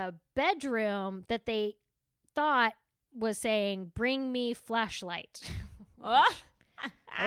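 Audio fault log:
No audible faults anywhere in this speech recording.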